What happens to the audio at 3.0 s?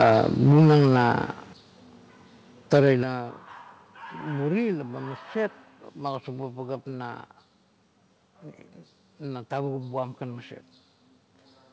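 Right around there, from 2.72 to 2.92 s, the peaks crunch harshly, most likely microphone overload: input running about 1 dB too hot, so a small share of samples get flattened at the converter. Then at 3.03 s the whole level, background included, suddenly drops by 8 dB in one step, the microphone volume stepped down, presumably by the call software reacting to that clipping.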